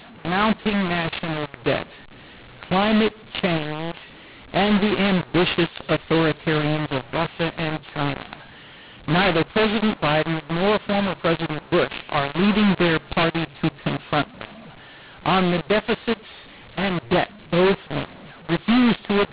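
From start to finish the speech carries a mu-law and A-law mix-up: samples coded with G.711 A-law are being expanded with the mu-law curve. Because the two logarithmic tables disagree, levels come back scrambled, some too loud and some too soft, and the smallest values land well above zero. The result is harsh, gritty distortion on every syllable, with noise filling the pauses. The band still stops below 4 kHz, consistent with 8 kHz telephone coding.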